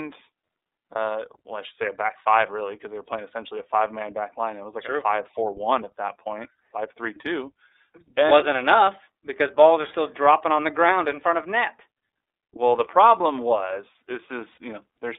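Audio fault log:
throughout: iLBC codec. The speech is held to a telephone band of about 300 Hz to 3.7 kHz and has a plainly audible rough, synthetic edge, which fits the 13.33 kbps mode with 30 ms frames. On a spectrogram nothing shows above 3.7 kHz, and the harmonics look grainy.
0.93–0.96 s, 14.52–14.58 s: lost iLBC frames. Just before "well I should say" and just after "the problem was", the decoder fills the gaps, 30 ms and then 60 ms long, by repeating the last pitch cycle mixed with noise. Each gap sounds like a brief buzzy held vowel. The waveform shows repeated periods, and the spectrogram shows flat, frozen harmonics.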